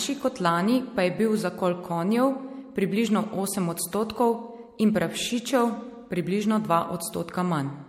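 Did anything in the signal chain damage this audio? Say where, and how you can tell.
Yes. Throughout the speech it sounds swirly, smeared and hollow, with blurred attacks and nothing above 16.6 kHz. That points to the codec stage, likely repeated lossy MP3 passes at around 64 kbit/s (about three generations) whose shifting frame grids compound quantisation noise and spectral holes.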